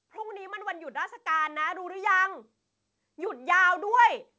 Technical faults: automatic gain rising

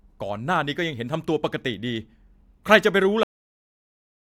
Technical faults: cut-off end

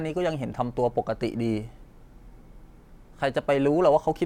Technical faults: none

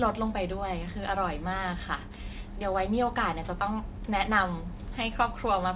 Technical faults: aliasing

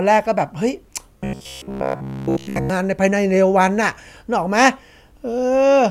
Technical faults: robotic sound from repeated short buffers

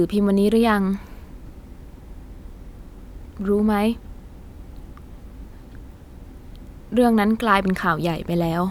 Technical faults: none

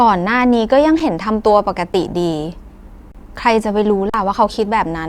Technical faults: underrun with held sample

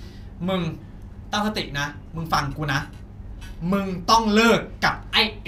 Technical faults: none

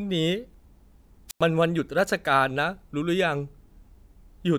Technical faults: wireless microphone squelch dropout

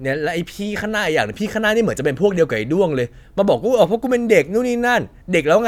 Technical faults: none

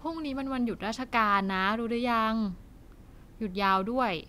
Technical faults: clock slip clicks

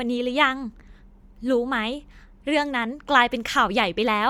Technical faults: Bluetooth LC3 compression

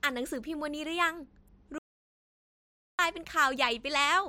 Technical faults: audio dropout to silence

